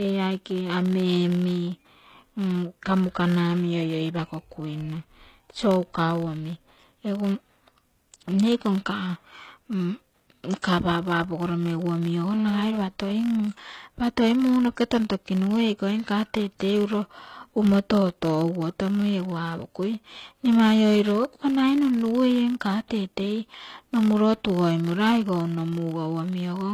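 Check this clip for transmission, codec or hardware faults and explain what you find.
The speech has four kinds of fault: a steady block-rate buzz and codec damage throughout, plus two pre-echoes and a short burst of phone interference.

Throughout the clip a low buzz at 43.1 Hz rides on the speech and rises and falls with its level. This is a filter restarted on every block: the filter drops its memory at each block boundary and begins again from silence, so every block opens with a small transient. A repeat rate of 43.1 Hz fits a 1024-sample block, and because each transient scales with the signal, the buzz tracks loudness rather than sitting at a fixed level.

The codec damage is plainly audible across the whole clip. The treble does not match the lower range, and s sounds come out gritty, metallic or lispy. The likely cause is HE-AAC compression at a low bitrate, around 20 kbps. HE-AAC codes only the lower spectrum and rebuilds the highs by copying lower bands upward under a coarse envelope. 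The rebuilt harmonics do not line up with the real ones across the crossover, which gives the treble its artificial character.

Pre-echo occurs at 10.62 s, spreading about 18 ms, and again from 22.88 to 22.90 s, spreading about 27 ms. Each time a short hiss comes just before a sharp attack, and the attack itself sounds soft or smeared. The transform codec spreads its quantisation noise evenly over a block. When an attack lands late in that block, noise sized for the loud part also fills the quiet moment before it.

From 12.34 to 13.40 s there is GSM phone buzz, a hard, raspy buzz at about 217 Hz with many harmonics. It sits about 16 dB below the speech and has no connection to it. A nearby 2G phone transmits in bursts 217 times a second, and the audio circuitry rectifies those radio pulses into sound. The phone here is transferring data rather than holding a call, so the buzz comes and goes instead of staying steady.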